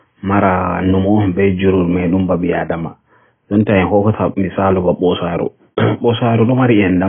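AAC compression damage runs throughout this speech clip: nothing survives above 3.4 kHz, leaving it dull, smeared and warbly on sustained sounds. The heavy damage likely comes from an AAC-LC encoder starved of bits, which fits a bitrate around 16 kbps.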